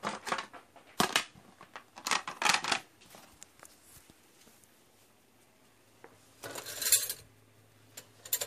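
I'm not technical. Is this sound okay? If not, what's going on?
No. Just before 1.0 s, at about 0.98 to 1.0 s, there's pre-echo. A short hiss arrives about 20 ms before a sharp hit, so the hit sounds soft and smeared. The compression handled that moment in one long chunk, so its noise leaked ahead of the hit.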